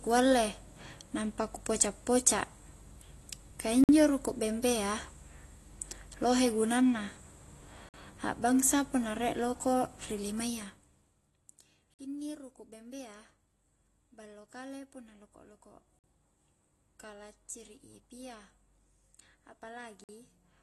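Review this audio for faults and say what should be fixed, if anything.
The whole clip sounds like AAC compression, likely AAC-LC at around 32 kbps. Nothing comes through above 12 kHz, so the speech is dull, and the coarse quantisation adds audible smearing and a fizzy edge on sibilants. Encoding at a higher bitrate, or keeping a lossless master, would prevent it.

There's also a gap between chunks every 4 seconds: a 50 ms hole at 3.84 s (just before "ruku' bembea"), 7.89 s (before "a'bangsa punna rie loko'"), 11.94 s (before "inni ruku' bembea"), 15.99 s and 20.04 s. The audio seems to be handled in 4-second chunks, with silence left at each join. Trimming codec padding and having the player queue the next chunk ahead of time would close those holes.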